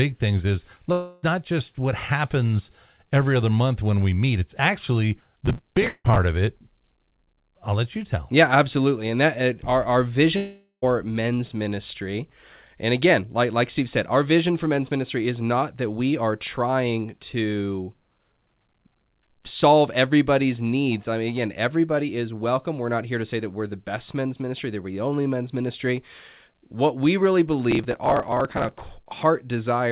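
At 0.92 s the sound breaks off for about 0.3 s, bridged by a fading buzz-like continuation of the last sound. This is a long network dropout, likely caused by packets never arriving. Unlike a brief glitch, the lost material simply isn't there when the audio resumes at 1.24 s.

From 5.18 to 6.20 s a gritty processor overload crackle tears across the sound. Overlapping it, a second dropout runs from 5.88 to 6.06 s, with its fading fill ending in about 40 ms of silence. The crackle comes from many missed deadlines in a row, each skipping a sliver of audio, which fits buffers of a few milliseconds. It differs from a dropout because the sound keeps going underneath the dense, hard-edged ticks rather than stopping.

The third dropout, from 10.36 to 10.84 s, is the longest at about 0.46 s, and its fill decays into roughly 0.11 s of silence.

The crackle returns from 27.71 to 28.89 s. Through the whole clip the G.711 call path leaves nothing above 4 kHz.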